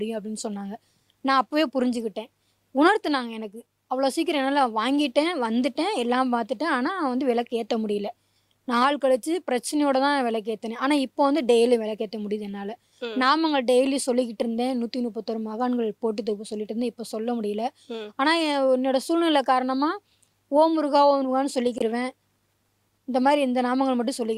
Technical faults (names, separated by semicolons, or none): corrupt frame muted